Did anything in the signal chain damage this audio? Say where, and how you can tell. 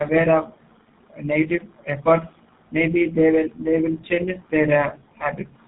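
Yes, at the codec stage: tandem speech coding throughout the clip. The speech is rough, muffled and warbly, with nothing above 3.8 kHz, which points to a G.729A-style coder followed by GSM full rate, the later coder re-encoding the earlier one's already degraded output.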